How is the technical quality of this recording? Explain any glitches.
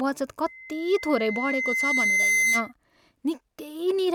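The recording has one clear fault: a loudspeaker feedback squeal from 0.46 s to 2.72 s. A pure tone at about 2.1 kHz rises out of the speech, swelling over roughly two seconds until it sits around 5 dB above the voice. The microphone is picking up the loudspeaker it feeds, and at 2.1 kHz the round-trip gain tops unity, so that frequency reinforces itself on each pass. The squeal ends at 2.72 s.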